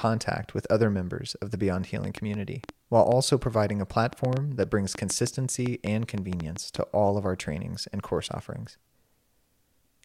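Likely interference or a faulty connection injects a train of clicks from 2.04 to 6.77 s: about twenty uneven pops, roughly 4.5 per second, ending before "all of our trainings".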